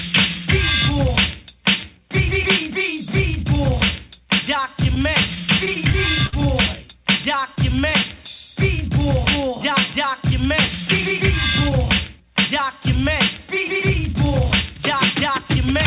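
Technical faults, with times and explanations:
4.84–6.34 s, repeated stalls (stutter): eight brief holds, the longest 59 ms and 124 ms in total. Late packets kept emptying the jitter buffer, so the last sound was stretched across each wait. Nothing is lost, but the audio drags and stutters.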